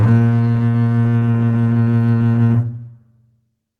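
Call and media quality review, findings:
Music plays with a faintly dragging, unsteady tempo and small recurring hiccups throughout. Clock drift between sender and receiver: the sender's clock runs roughly 5% slow, so the jitter buffer keeps draining and the receiver must stretch playback to avoid gaps.

Repeated timing corrections, 0.13 to 3.72 s: short pieces repeated at uneven intervals, all in the lengthening direction, playback at 96% speed. The receiver-side buffer adjustment adds roughly 150 ms in total to keep pace with the slow sender.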